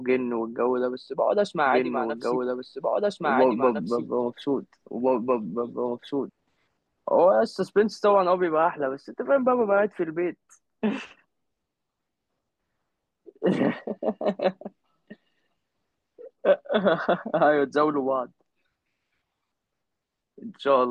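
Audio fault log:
1.66–6.30 s, doubled audio track: the speech suddenly gets a second copy of itself trailing about a second and a half behind, at roughly the same loudness as the original, so the two lines talk over each other. The copy is dry and full-band, with no decay or room sound, and it cuts in and out abruptly. That points to a likely second capture path running late or an edit leaving two misaligned copies stacked.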